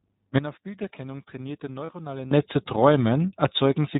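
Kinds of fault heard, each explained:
iLBC codec: The whole clip is band-limited to nothing above 4 kHz, and the speech sounds rough and slightly synthetic, plainly audible throughout. The coarse texture fits iLBC's 13.33 kbps mode with 30 ms frames, unlike wideband codecs, which keep sibilants crisp.
Sudden gain jump: At 0.38 s the level drops by about 16 dB in a single step, with the background falling along with the speech, then jumps back at 2.32 s. There is no fade, so this is likely a gain setting applied without a ramp, not a volume ride.
Lost iLBC frames: At 1.86 s, 30 ms of speech gives way to a brief held, buzzy vowel-like sound, which fits one lost frame being concealed by repeating the last pitch cycle. Clean speech returns at once, unlike a dropout, which leaves silence.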